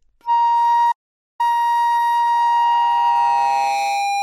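Audio dropout to silence at 0.92 s to 1.40 s. The sound stops abruptly and returns just as abruptly almost half a second later, about 0.47 s in all. The gap is digital silence, with no background or room tone underneath, so whatever happened in that span is simply missing. The likely cause is a brief loss of the input, such as a disconnected device, a failed link or an accidental mute, while recording carried on writing zeros.

Loudspeaker feedback squeal from 2.33 s, continuing to the end of the clip. A single tone at 805 Hz emerges and swells over roughly a second and a half, then sits a little below the level of the rest of the sound. This happens when a microphone hears the loudspeaker it is driving: at 805 Hz the loop gain tops one, so each pass through the system reinforces that frequency until it rings on its own.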